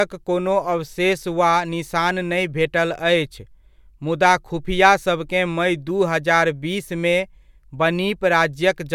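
No faults can be heard anywhere in the recording; the speech runs without a dropout, click, glitch or level jump.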